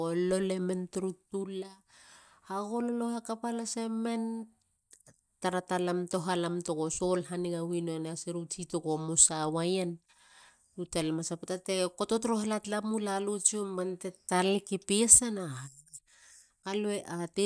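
No technical faults can be heard anywhere in the speech recording, which stays steady and intact throughout.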